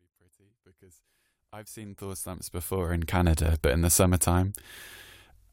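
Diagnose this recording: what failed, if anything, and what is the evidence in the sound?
No failure at any stage: the speech rises on a smooth editorial fade-in from the very start to full level at 3.31 s, with no click or hard edge.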